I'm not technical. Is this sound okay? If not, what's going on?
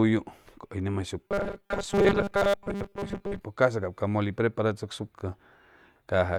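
No. From 1.28 to 3.40 s the speech becomes a stiff, metallic buzz at a steady 200 Hz. It still loosely follows the words. This is robotic sound from repeated short buffers. Audio likely arrived too slowly, so tiny 5 ms chunks were replayed through most of that stretch.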